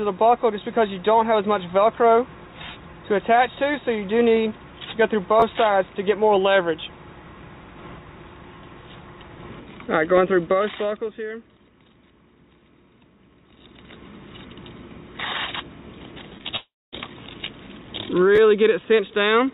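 At 5.40 to 5.42 s a repeated buffer occurs. Fresh audio missed its deadline, so the same roughly 11.6 ms block, consistent with a 512-sample buffer, played twice more, costing about 20 ms. It is a brief buzzy stutter. The waveform shows identical cycles with hard seams, and the spectrogram shows faint vertical lines at each join.

From 16.38 to 16.46 s, two back-to-back short concealed packet losses occur. Packets reached the decoder too late, and the receiver extended the preceding sound for 13 ms and then 31 ms before blending back. This produces a quick smear or wobble, visible as slightly blurred, over-smooth harmonics.

Between 16.56 and 16.94 s, the sound is carried on and fades, then drops to silence for about 230 ms before resuming with material missing. This is likely a long network dropout. The waveform flattens to near zero, and the spectrogram shows a blank gap, sitting within the G.711 band that stops at 4 kHz.

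At 18.36 to 18.38 s the repeated buffer returns: the same 11.6 ms block is replayed twice, about 20 ms is lost, and another short stutter is heard, seen again as a run of repeated cycles with abrupt edges.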